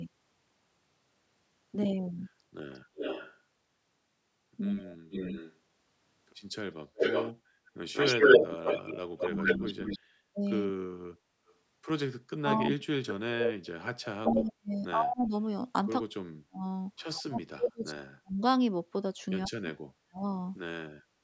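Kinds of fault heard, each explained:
Echo leak: A delayed copy of the speech trails the talker, briefly at 2.73 to 3.37 s about 348 ms behind and roughly 10 dB down, then from 4.9 to 14.41 s about 188 ms behind at nearly equal loudness, likely from a loudspeaker echo the far end's canceller missed.
Speech suppressed in double talk: The talker's speech dips sharply, by around 40 dB at its deepest, in a short spot near 4.89 to 5.14 s and in pieces adding up to about five seconds between 9.29 and 20.19 s, likely the canceller pulling everything down while both sides spoke.
Background gated by the echo canceller: The room sound briefly sinks, by about 7 dB from 7.41 to 7.66 s and about 6 dB in the final moment at 21.17 s, because the echo canceller clamped the microphone while the loudspeaker was playing.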